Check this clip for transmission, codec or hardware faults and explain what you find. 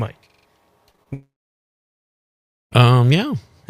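Three kinds of fault occur, all in the first three seconds.

Repeated buffer, 0.30 to 0.47 s: fresh audio missed its deadline, so the device replayed its last block four extra times. Each block is about 43 ms long, which fits a 2048-sample buffer. You hear a rapid stutter with hard joins, and roughly 150 ms of audio is lost.

Short concealed packet loss, at 0.91 to 0.96 s, 0.96 to 1.00 s and 1.03 to 1.08 s: each time, about 20 ms failed to reach the decoder. The receiver extrapolated from the preceding sound and crossfaded back into the real signal. The result is a brief smeared wobble at each point.

Long network dropout, 1.14 to 2.73 s: the likely cause is a network outage that stopped audio for about 1.6 s. The receiver first continued the last sound as a fading buzz or hiss. Near-silence then holds for roughly 1.4 s, and the sound resumes with that stretch missing.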